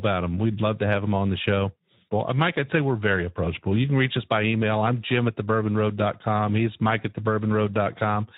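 From start to finish, Speex coding at a low setting, consistent with about 11 kbps, starves the excitation of bits, leaving the speech plainly noisy and hoarse.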